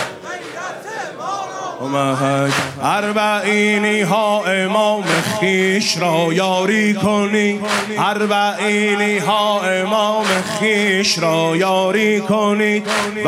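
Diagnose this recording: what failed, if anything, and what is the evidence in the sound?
Nothing in the signal chain failed: the level, continuity and timing hold steady throughout, with no audible damage at any stage.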